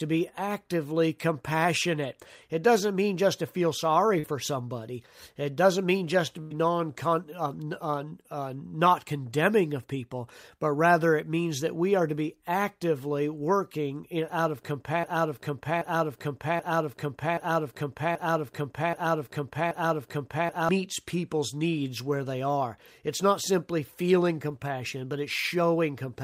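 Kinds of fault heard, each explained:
Short concealed packet loss: At 4.19 s, after "just to feel sorry", about 40 ms failed to arrive and was filled by extending the preceding sound, leaving a brief smear before "somebody it doesn't mean". It is too short to become an audible buzz or fade.
Burst of packet loss: At 6.41 s, after "doesn't mean just to", about 90 ms was filled by continuing the last sound while turning it down, so a held buzz or fading hiss replaces the audio. It is longer than the short loss and has a decaying tail.
Broken-record loop: From 15.04 to 20.69 s, after "working in out of", a 0.78 s fragment repeats seven times back to back, likely from a stalled player or stream resending its last piece, until "people's needs where they". The repetition is exact, with no fading concealment.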